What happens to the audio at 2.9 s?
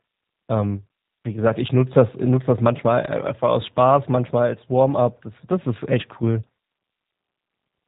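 G.729 codec coding runs through the whole clip, including 2.9 s. The speech is rebuilt from a filter and sparse pulses, with nothing above 4 kHz. It sounds rough and synthetic, which fits 8 kbit/s.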